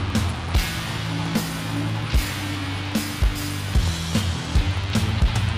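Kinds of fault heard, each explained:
Periodic USB or driver dropouts: a background task stalls the USB bus or audio driver at a fixed interval, and each stall loses a tiny slice of audio that is replaced by silence. Here the gaps recur every 64 ms, roughly 16 per second, from 0.10 s to 5.48 s, each well under a millisecond long, so about a hundred of them occur. They come through as a steady train of small ticks that sound only where signal is present.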